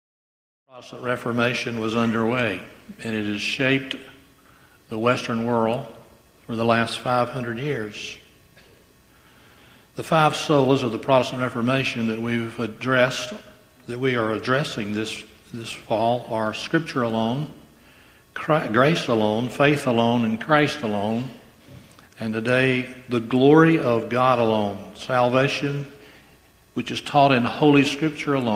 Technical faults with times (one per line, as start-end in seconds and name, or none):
none